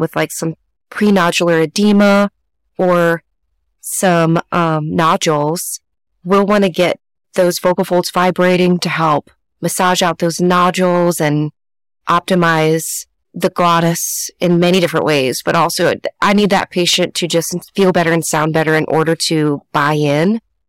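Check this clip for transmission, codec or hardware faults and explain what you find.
The speech carries one fault, hard clipping, present for the whole recording rather than in isolated bursts. The level reaching some stage was about 11 dB more than it could pass, so every peak above its ceiling is sliced flat, roughly one sample in twenty. Those squared-off tops generate harmonics high into the spectrum, heard as a harsh fuzz riding on each loud syllable. A saturating or soft-limiting stage would round the peaks instead and sound warmer and duller.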